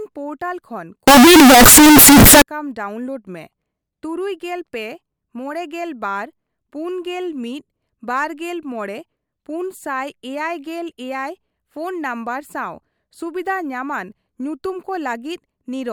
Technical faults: signed and unsigned mixed up

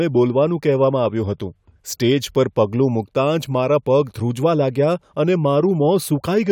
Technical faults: none

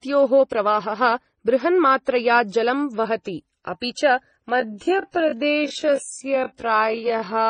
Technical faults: transcoding between lossy codecs; time-stretched section

